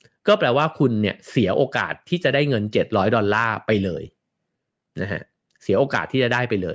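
No technical faults can be heard at any point in this recording.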